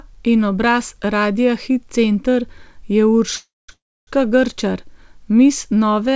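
Call audio freezes at 3.36 to 3.70 s and again at 3.72 to 4.09 s: the speech halts, a brief fading buzz carries on, then silence for about 0.21 s and 0.30 s, likely from delayed packets draining the jitter buffer. Speech resumes where it stopped, nothing lost, about 0.33 s and 0.35 s later. The G.722 call path leaves nothing above 8 kHz.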